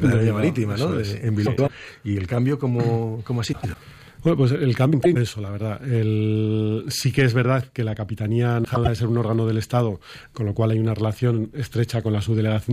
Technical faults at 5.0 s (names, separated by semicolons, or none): frames out of order